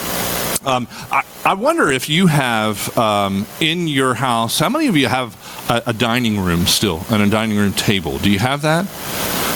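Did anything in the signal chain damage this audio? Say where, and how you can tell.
Yes. Gain pumping runs throughout: loud and soft parts sit closer in level and the sound is squashed, with the gain swinging around 30 dB, likely from excessive input gain hitting a fast limiter.

A call bitrate drop at the network-to-codec stage spans 0.45 to 1.99 s. The sound turns rough and muffled, which fits the encoder falling from about 96 to 21 kbps.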